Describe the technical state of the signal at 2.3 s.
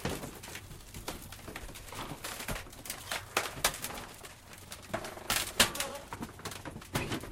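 At 2.3 s the signal falls within repeated timing corrections that run from 0.20 s to the end. The receiver keeps cutting out short pieces to stay in step with a sender running at 104 percent speed. The cuts are small and unevenly spaced, heard as slight hiccups or an unsteady pace in the sound.

Behind this lies clock drift between sender and receiver, present throughout. The sender's audio clock runs fast by about 4 percent, so the jitter buffer keeps filling up faster than it empties. Each small timing hiccup at this point is the receiver shedding that surplus.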